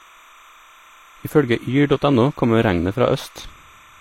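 It's a short speech recording with a timecode bleed running the whole way through: a steady chirpy warble flipping between roughly 1 and 2 kHz, sitting about 30 dB under the voice. Its rhythm fits 29.97 fps linear timecode leaking in from a neighbouring track or cable. On top of that, the top end stops dead at 16.3 kHz, and there's a smeary, swirly layer of artefacts that don't quite match each other. That's most likely transcoding between lossy codecs, something like an MP3 around 58 kbit/s re-encoded to HE-AAC at about 32 kbit/s, with the second codec chewing on the first one's damage.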